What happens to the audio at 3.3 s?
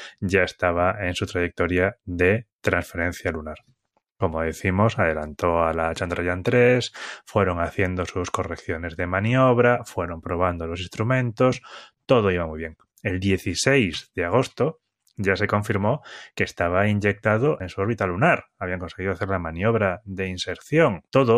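Nothing goes wrong at 3.3 s; the speech carries on intact there, with no dropout, click or distortion.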